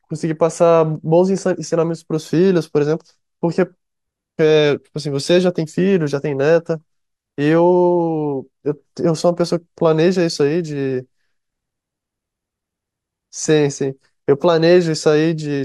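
Nothing in this recording of speech stands out as a technical fault; it runs along without any glitch, dropout or other problem you could point to at a particular moment.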